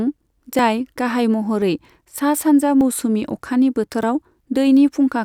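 Small jumps forward in the speech occur at 0.59, 1.62, 2.81 and 4.03 s, each skipping about 10 ms, except about 30 ms at 2.81 s. This is likely a dropped buffer (overrun), where unread audio was overwritten and the surrounding pieces were spliced directly together.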